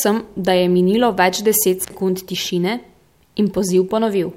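A speech clip with an intermittent contact between 1.81 and 1.94 s: a loose connection briefly opens, cutting the signal for about 57 ms. Crackle at both edges and faint hiss in the gap distinguish it from a clean digital dropout.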